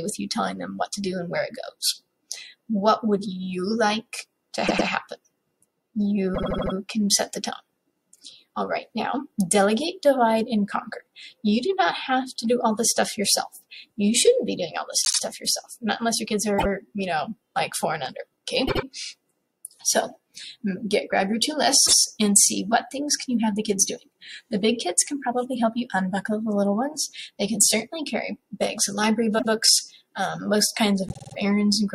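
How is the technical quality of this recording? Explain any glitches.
Repeated frames spoil it: the same compressed chunk was sent again and replayed, so the audio stutters. Stutters fall at 4.66, 6.34, 15.04, 16.58, 18.67, 21.85, 29.38 and 31.07 s. The repeated slices run 52 to 157 ms, and the longest burst, at 6.34 s, adds 0.39 s.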